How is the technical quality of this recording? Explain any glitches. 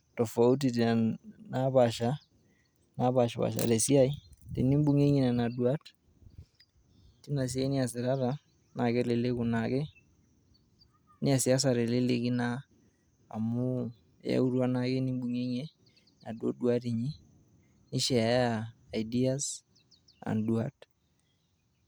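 No glitches or technical faults can be heard anywhere in the recording.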